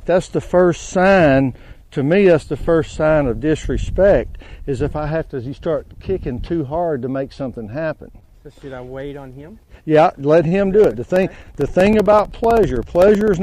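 The audio has two short stalls from a late packet, at 8.20 s and 10.49 s. Each time the jitter buffer ran dry, and the last sound was stretched for about 19 ms and then 30 ms, adding that much delay. On a spectrogram each shows as a brief frozen, horizontally smeared stretch. Periodic USB or driver dropouts run from 10.84 s to 13.34 s. Every 64 ms about 2 ms of signal is replaced by silence, around forty times, heard as steady ticks. They appear as evenly spaced thin vertical broadband lines on the spectrogram and tiny flat gaps in the waveform.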